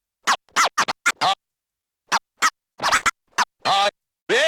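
A recording of everyday sounds, it has brief smears at 1.81, 1.91, 2.74, 2.90, 3.58 and 3.83 s. This is short concealed packet loss: roughly 20 ms chunks, one of 40 ms at 2.74 s, arrived too late. The decoder papered over each gap by extending the preceding sound, and the 3.83 s repair also stretches things by around 20 ms. Twice the patching is longer. From 2.97 to 3.16 s and again at 4.20 to 4.28 s, the sound holds as a fading buzz or hiss and then jumps ahead. These are bursts of packet loss. About 40 ms and then 60 ms of audio went missing, and the receiver continued the last sound while turning it down across each gap.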